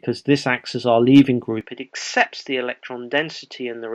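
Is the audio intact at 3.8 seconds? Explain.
No. From 1.61 s to the end, it sounds like the input likely switched to a poorer device. Nothing comes through above 7.6 kHz, so the sound goes duller and boxier. It drops about 5 dB, with a faint new noise floor, and there's no gap at the switch.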